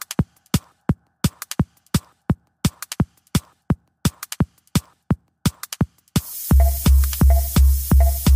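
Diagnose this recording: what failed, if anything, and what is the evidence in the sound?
A wrong sample rate at the playback stage. The whole clip runs fast and high. Everything is sped up about 1.38 times and raised about 5.5 semitones, together and unchanged throughout. That fits 32 kHz material clocked out at 44.1 kHz without conversion.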